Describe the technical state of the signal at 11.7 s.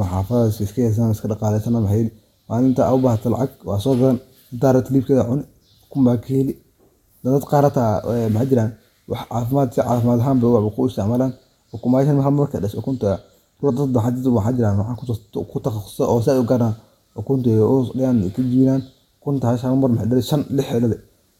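At 11.7 s the signal is intact, with no audible fault at that moment.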